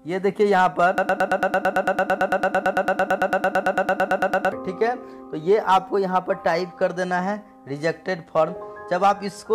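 From 0.98 s to 4.52 s the audio locks into a stutter: a single sliver of sound, about 0.11 s long, replays exactly and back to back, roughly 32 times, before normal playback returns. This is a broken-record loop, likely caused by the player, encoder or stream stalling and resending the last fragment it held, so the material that belonged in those three and a half seconds is lost.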